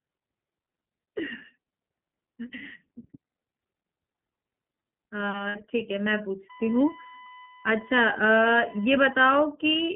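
Throughout, the speech runs through the iLBC codec on a narrowband line of 150 Hz to 3.4 kHz, so it sounds plainly rough, synthetic and muffled.

From 5.49 to 5.56 s, 60 ms of lost iLBC frames are concealed by repeating the last pitch cycle with noise, which gives a brief, buzzy held vowel.

From 6.50 to 9.21 s, current drawn by the USB bus leaks in through power or ground as a USB whine. This is a steady 1 kHz tone about 25 dB below the speech.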